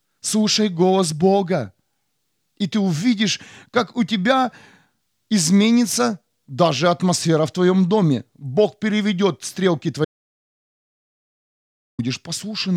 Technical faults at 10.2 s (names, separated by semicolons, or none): audio dropout to silence